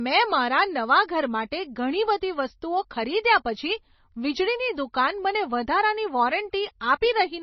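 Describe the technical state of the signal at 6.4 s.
At 6.4 s the speech carries heavy damage that runs through the whole clip, likely from MP3 compression at a low bitrate near 24 kbps. The encoder discards treble, leaving nothing above 6 kHz, and weak frequency lines drop in and out between frames, so the sound is watery and swirly with smeared consonant onsets. A spectrogram shows a hard ceiling at 6 kHz and flickering, patchy gaps below it.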